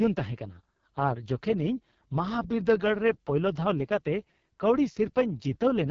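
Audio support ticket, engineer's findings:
Rough, raspy speech throughout, nothing above about 7.2 kHz. AMR wideband (HD Voice) codec at heavy damage, sounds like its lowest 6.6 kbit/s mode starving the vocal-tract model.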